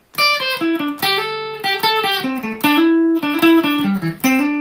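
From 0.03 to 0.13 s, the quiet background gives way to a flat, featureless hiss about 4 dB softer than the real ambience, sitting roughly 42 dB below the loudest parts. For that tenth of a second the texture of the room vanishes. This is comfort noise in place of the background, likely from discontinuous transmission such as Opus DTX: the sender paused its stream in silence, and the receiver filled the gap with synthetic noise.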